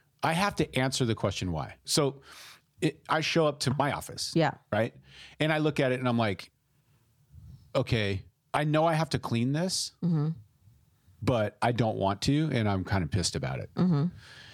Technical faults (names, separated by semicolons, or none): none